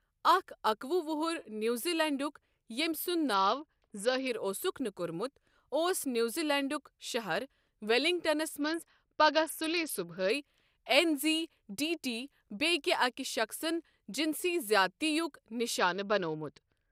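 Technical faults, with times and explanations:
3.34–4.27 s, 8.61–10.30 s (just after "شہر ویلنگٹنَس") and 15.79 s to the end, Bluetooth SBC bit pool drop: the speech suddenly goes dull and muffled, with a gritty, grainy noise riding on it, then clears, except the last time, which lasts to the end. The Bluetooth link was struggling, so the sender cut the SBC bit pool, which fits a drop from 31 to 8, around 66 kbps. The upper sub-bands got almost no bits, stripping the treble, and the remaining bands were coarsely quantised, producing the grit.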